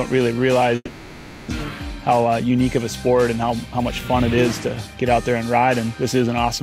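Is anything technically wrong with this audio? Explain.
Yes, there are two faults.

From 0.75 to 1.52 s there is a long network dropout, likely. Audio stopped arriving, so the receiver stretched the last sound into a fading buzz for about 750 ms, then a brief silence of about 20 ms. Around 400 ms of material never returns. On a spectrogram the last frame smears into flat, decaying bands before the signal resumes.

From 1.99 to 4.95 s a jitter buffer speed-up follows. With too much audio queued, the receiver repeatedly cut short pitch-period-sized pieces, removing roughly 300 ms in total. Playback runs at 111% speed with unchanged pitch and sounds hurried. The waveform shows periodic cycles of unchanged length.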